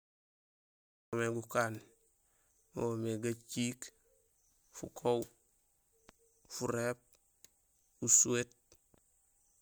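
A speech recording with a cut-off start: the first 1.13 s is pure digital silence, and at 1.13 s the sound appears already in progress, with no natural attack or fade-in. The capture or stream evidently began late, joining the speech partway through. Unlike a noise gate opening or a slow fade-in, the level is already at full strength on its first sample, so the beginning of that sound is missing.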